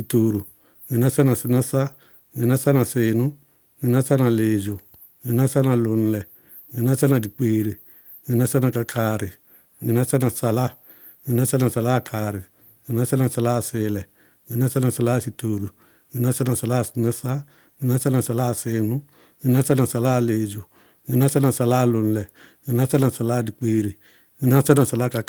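No technical faults can be heard anywhere in this speech recording; the signal holds steady throughout, with nothing in it breaking or going wrong.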